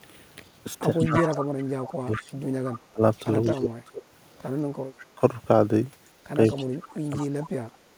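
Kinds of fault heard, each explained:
Echo leak: A delayed copy of the speech trails the talker by 190 ms, at 0.99 to 1.37 s, 1.9 to 3.57 s, 6.46 to 6.58 s and 7.18 to 7.27 s. It is strongest in the first burst, only a few dB under the direct speech, and faint elsewhere, down to about 30 dB below. The likely cause is a speakerphone on the far side whose echo canceller let part of the loudspeaker sound back into its microphone.
Speech suppressed in double talk: The talker's level sinks while the other side is speaking, dropping by roughly 30 dB across about two seconds between 1.01 and 4.04 s. It dips again, more mildly, at 4.86 to 5.22 s, then deeply again at 6.58 to 7.52 s. The likely cause is an echo canceller that could not separate its local talker from the loudspeaker echo during overlapping speech and turned both down together.
Background gated by the echo canceller: Near the very end, between 7.8 and 7.92 s, the room sound briefly dips by about 7 dB for roughly a tenth of a second, then comes back. 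This happens because the echo canceller clamped the microphone hard while the loudspeaker was playing. That takes the ambient noise down with it until the canceller releases its hold on the signal.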